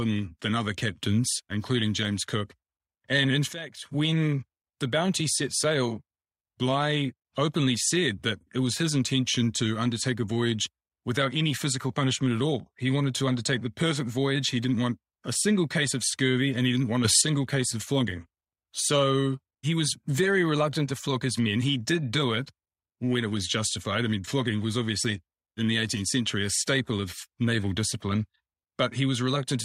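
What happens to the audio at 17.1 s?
A sudden gain jump hits the speech from 17.05 to 17.22 s, between "and he didn't want" and "case of flogging". Level and background noise rise together by about 7 dB, most likely a gain change applied sample to sample with no ramp.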